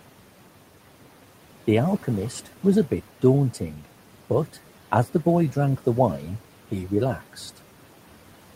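Throughout the speech, the background sinks between phrases and swells under them: noise suppressor artifacts, cutting steady noise by about 12 dB.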